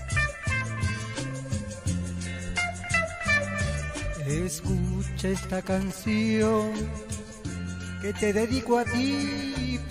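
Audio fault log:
5.19–5.92 s, GSM signalling bursts: a galloping run of short buzzes at about 217 Hz, roughly 15 dB below the audio, as a nearby 2G phone sends brief radio bursts that the audio circuit rectifies into audible clicks.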